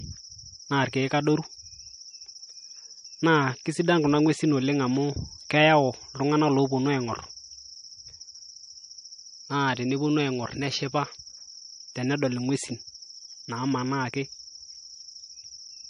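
Throughout the speech, treble stops dead at 10.6 kHz and weak detail swirls and chirps, likely MP3 compression at a low bitrate near 38 kbps, unlike plain filtering.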